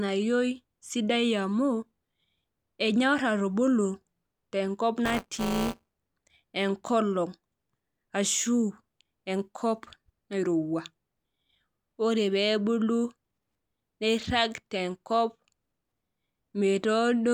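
From 5.05 s to 5.97 s the speech takes on a robotic, rattling buzz at 188 Hz that lasts only while the voice is sounding. This is buffer tearing: the writer and the hardware reader of the playback ring buffer have drifted until they cross inside each period. About a tenth of every buffer carries audio from roughly 15 ms earlier, spliced in with hard joins. The 188 Hz repeat rate fits a 256-sample buffer.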